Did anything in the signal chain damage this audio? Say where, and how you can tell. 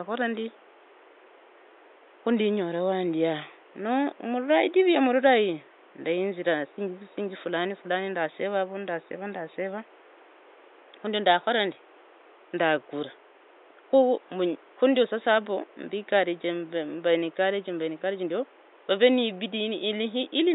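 No, nothing along the chain seems to have harmed this speech, and the only thing underneath it is the quiet background noise of the room itself, sitting about 29 dB below the talking.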